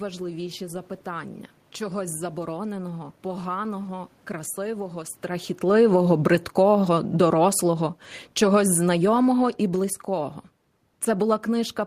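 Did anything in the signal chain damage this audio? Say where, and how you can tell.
Yes. Automatic gain falling, 5.64–10.39 s after "чогось забороненого поганого красивого": call-processing AGC lowered gain about 9 dB, so room noise sinks with the speech.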